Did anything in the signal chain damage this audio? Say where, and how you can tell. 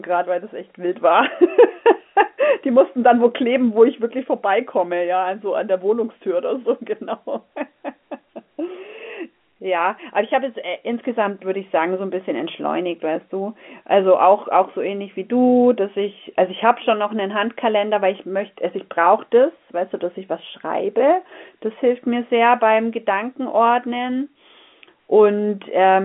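No, nothing in the chain damaged this speech; the 150 Hz to 3.4 kHz band with nothing above 3.8 kHz is simply the normal signature of G.711 A-law telephone coding at 64 kbps.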